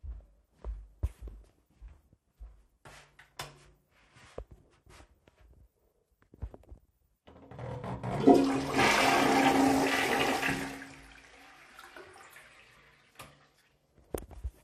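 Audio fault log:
throughout, MP2 compression: Dull, gurgling, granular sound with flickering highs. Likely MPEG Layer II coding near 80 kbps, leaving too few bits for the upper sub-bands.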